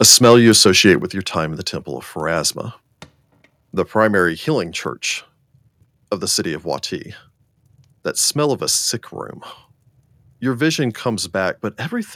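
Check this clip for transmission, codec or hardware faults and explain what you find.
Two faults turn up, both in the first second and a bit, and both are hardware and level problems rather than transmission or codec faults.

Microphone overload, from 0.01 to 0.92 s: the loudest syllables have a harsh, crackling edge. The likely cause is an input level set too high, driving peaks about 5 dB past the converter's ceiling so their tops are flattened. Only a small share of samples, around one or two percent, are hit, so the distortion flares on the peaks rather than running through everything.

Microphone volume stepped down, at 1.02 s: voice and background drop together by about 6 dB in a single step, just before "your time in the". This is likely the call software reacting to the preceding clipped peaks by cutting the device's input gain in one move. The sound afterwards is quieter, with the level change audible as an abrupt step rather than a fade.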